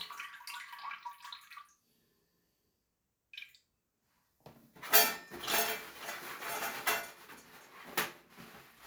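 No technical faults are audible.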